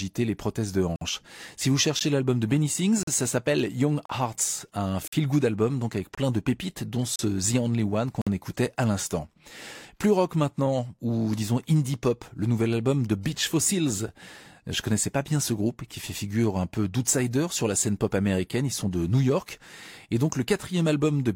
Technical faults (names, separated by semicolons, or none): gap between stream segments